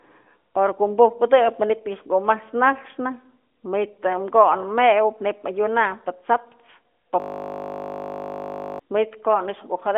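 At 7.2 s the machine or its audio driver stalls, and the sound hardware keeps cycling through the last block in its ring buffer. The result is a system hang loop: a single 20 ms piece of the speech repeats exactly, about 80 times, until 8.79 s. Repeating at 50 Hz, it fuses into a steady, flat buzz with a fixed pitch. Because the speech is carried by the AMR narrowband mobile codec, with nothing above 3.8 kHz, the buzz sounds dull and band-limited.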